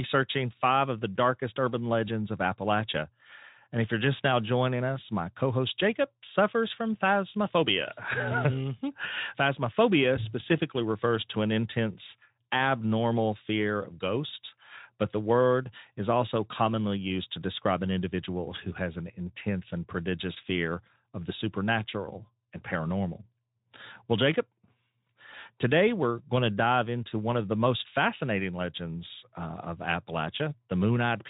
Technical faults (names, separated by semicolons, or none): none